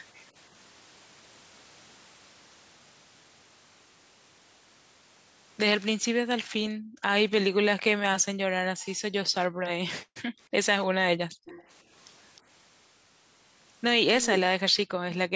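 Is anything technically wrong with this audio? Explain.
Yes, the recording has two kinds of fault from a speakerphone call.

Background gated by the echo canceller, at 6.68–7.02, 9.49–9.63, 10.04–10.39 and 10.88–11.46 s: while the far end played through the loudspeaker, the canceller clamped the microphone, dropping the room sound by about 40 dB (about 22 dB at 9.49 s). The waveform shows flat gaps, and the spectrogram shows blank vertical bands.

Echo leak, at 11.46–11.64 and 12.36–12.41 s: a faint copy of the speech returns 309 ms late, roughly 20 dB and then 35 dB below the direct speech. It is likely residual loudspeaker pickup that the canceller missed. On the spectrogram it appears as a weak, delayed repeat of the preceding speech.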